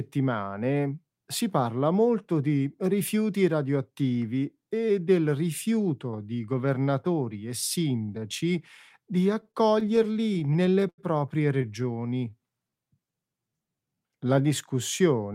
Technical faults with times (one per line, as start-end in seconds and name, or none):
9.41-11.00 repeated stalls (stutter)
11.62-12.11 repeated stalls (stutter)
11.72-13.96 jitter buffer slow-down